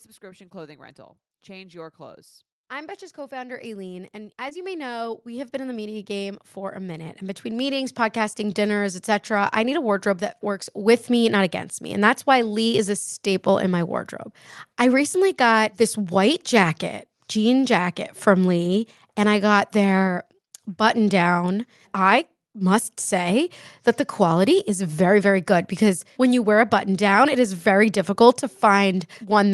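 Automatic gain rising runs from 0.19 to 11.59 s of this speech recording. The gain control judged the incoming level too low and lifted it steadily by about 22 dB, so the voice and the background noise swell together over those eleven seconds rather than jumping. A short concealed packet loss occurs at 4.49 to 4.53 s, where roughly 20 ms of the call arrived too late to decode. The receiver bridged the gap by extending the preceding sound before crossfading back into real audio, leaving a brief smear or wobble. The call path's codec tops out around 12 kHz, which points to Opus at a modest bitrate.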